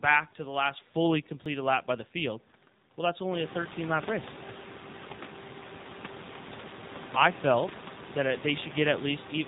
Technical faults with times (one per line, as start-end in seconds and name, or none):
0.00-9.47 AMR narrowband mobile codec
1.46 dropped buffer (overrun)